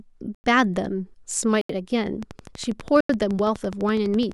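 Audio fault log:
0.35 to 0.44 s, 1.61 to 1.69 s, 3.01 to 3.09 s: block of digital silence. The sound drops to silence for about 94, 80 and 89 ms. It cuts out and back with no fade. This points to an output buffer not filled in time.
2.23 s to the end: train of clicks. A steady ticking runs at 12 clicks per second, evenly spaced and alike in shape. The peaks stand a few dB above the speech and carry through pauses. Interference from nearby equipment or a faulty connection or power supply is the likely cause.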